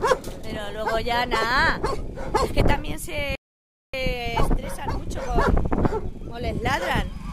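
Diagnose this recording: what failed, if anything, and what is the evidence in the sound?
A rebuffering stall at the playback stage: the sound drops to silence at 3.35 s and picks up again at 3.94 s exactly where it left off. No material is missing. The player ran out of downloaded audio and waited for more, adding about 0.58 s.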